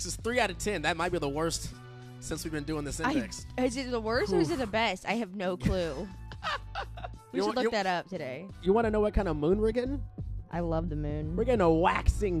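From 8.66 s to the end, de-emphasis is applied wrongly: a treble cut meant to reverse pre-emphasis lands on audio that never had it, tilting the response down smoothly to about 11 dB lower at 10 kHz than at 1 kHz. The sound turns dull and muffled.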